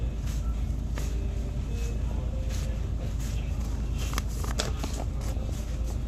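DAB burbling appears at 1.96 to 2.19 s, briefly at 3.66 s, and again at 5.37 to 5.50 s. Bit errors slip past error correction and corrupt samples and scale factors, so single sub-bands blip or jump in level for up to a frame, giving watery blips that turn squelchy and bubbling where errors are heavier. The last two bursts suggest heavier errors.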